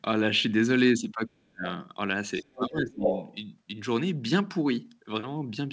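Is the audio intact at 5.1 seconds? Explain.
Yes, at 5.1 seconds the speech is intact, with nothing breaking up, dropping out or distorting beyond the normal band limit of a G.722 call path, which carries nothing above about 8 kHz.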